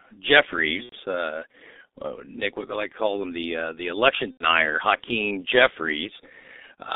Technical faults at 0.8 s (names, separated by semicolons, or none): G.723.1 codec; VoIP packet loss concealed by the speech codec